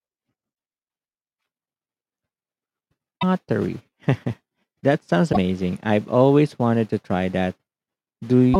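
Damaged data in a compressed stream breaks the speech at 0.52–0.54, 3.18–3.23, 5.29–5.37 and 8.51–8.56 s. Corrupt frames make the decoder lose sync. Each break is a brief chirp, squawk, click or short hole.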